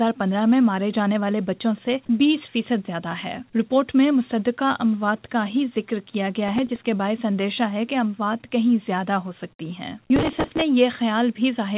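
Processor overload crackle appears from 6.48 to 6.86 s and again from 10.16 to 10.61 s. Buffers of roughly 3 ms miss their deadlines in quick succession, and each gap is filled with stale audio, producing hard-edged gritty tearing that stops once the load eases.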